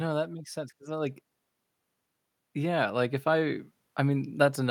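From 2.4 s to the end, automatic gain rising: the gain control, judging the input too quiet, steadily lifts it, so voice and background swell together; the waveform envelope widens progressively.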